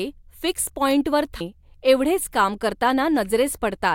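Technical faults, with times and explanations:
1.41 s, damaged data in a compressed stream: just after "फिक्स पॉंईटवर" the speech is briefly disrupted. A stretch of the compressed data at this point is corrupt, so the decoder can't read the affected frame properly. It loses its place in the stream and has to hunt for the next valid frame header before clean decoding resumes. That lost stretch is the short disruption.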